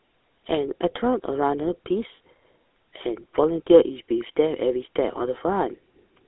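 Right through the speech you can hear the GSM full-rate codec at work: nothing above about 3.8 kHz, a thin 300 Hz to 3.6 kHz line band, and a clearly buzzy, gravelly grain where the sparse pulse excitation stands in for the real voice, which fits a 13 kbps stream.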